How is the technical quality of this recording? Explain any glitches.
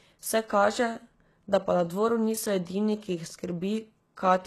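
The speech carries plainly audible codec damage throughout. Treble sounds synthetic, likely from HE-AAC compression at a very low bitrate. Spectral band replication rebuilds the highs from copied lower bands, so sibilants turn gritty and metallic, with nothing above 12.3 kHz.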